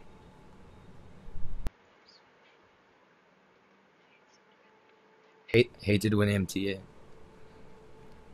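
From 1.67 s, just before "hated when empty", to 5.54 s the speech goes dull and boxy, loses everything above 6.9 kHz, drops roughly 5 dB and gains a faint new noise floor, then clears. Likely cause: input switched to a poorer device, with no gap at either change.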